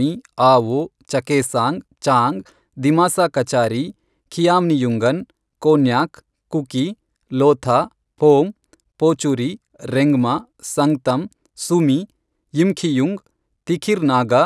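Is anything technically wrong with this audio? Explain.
Yes. Throughout the speech there is a faint, regular ticking at 10 per second, the sign of a resampler restarted on every block. The 48 kHz to 24 kHz conversion was run on each 100 ms block in isolation, so at every block edge the filter lacked the true neighbouring samples and left a small error there. A spectrogram shows thin vertical broadband lines every 0.1 s, present only where speech is, and the waveform shows small discontinuities at those edges.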